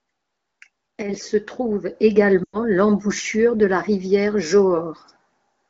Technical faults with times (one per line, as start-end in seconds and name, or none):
2.43-2.59 lost AMR speech frames